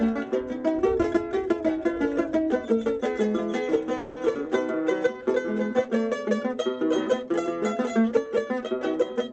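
From 3.97 to 4.19 s the sound stalls into a fading buzz or hiss for about 190 ms, then resumes where it stopped: a call audio freeze, likely from held-up packets emptying the jitter buffer. At 4.34 to 4.38 s the audio jumps abruptly forward, losing a short stretch of about 70 ms. This is a skip ahead, where queued audio was dropped and the two sides were joined almost directly. Both occur within sound limited to about 8 kHz by the call codec.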